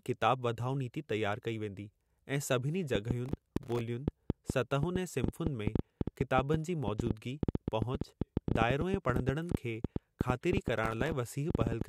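From 2.95 s to 11.82 s a train of clicks runs over the speech at about 6.9 per second, irregularly spaced, roughly seventy clicks in all, peaking well above the speech level. It is likely interference or a faulty connection injecting pulses. On a spectrogram each click is a thin vertical broadband line, and on the waveform a sharp spike, visible in pauses too.

Processor overload crackle appears from 3.26 to 3.81 s and again from 10.78 to 11.12 s. About 40 and then about 15 buffer deadlines were missed, each leaving a tiny hard-edged silent gap, consistent with buffers of roughly 1.5 ms. The result is a gritty tearing crackle. The waveform shows rapid notches toward silence, and the spectrogram shows speckled vertical streaks.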